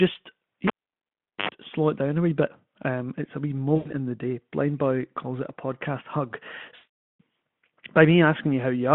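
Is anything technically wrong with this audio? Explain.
Yes. There are two kinds of fault. From 0.67 to 1.49 s a cable is pulled and plugged in: a pop, about 0.77 s of near silence, then a 50 Hz mains buzz of about 74 ms while only the tip makes contact, and a second pop as the sound returns. A dropout would not have the hum or the paired pops.

VoIP packet loss concealed by the speech codec occurs at 3.75 to 3.92 s and again at 6.75 to 7.21 s. The decoder fills each gap by extending the last pitch and filter shape and fading the gain. The speech smears into a fading buzzy tone or coloured noise. About 100 ms is lost in the first gap and 440 ms in the second, which fits five and twenty-two 20 ms frames. The voice stays weak for a moment after each gap because every frame builds on the one before.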